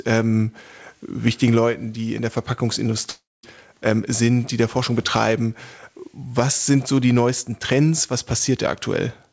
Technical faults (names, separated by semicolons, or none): long network dropout